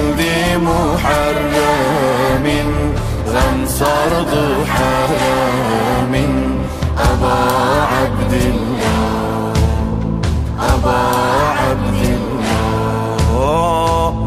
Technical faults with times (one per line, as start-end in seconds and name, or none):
none